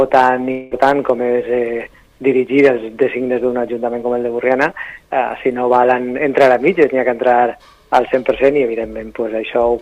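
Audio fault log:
0.51–0.73 s, long network dropout: for about 0.2 s the sound stops progressing and is replaced by a smeared, fading buzz that stretches the last moment of audio across the gap, with no full silence. When the sound resumes, roughly 200 ms of material is simply gone. This is likely a stall in the incoming stream, with the receiver concealing the hole by extending what it last had instead of playing the lost part.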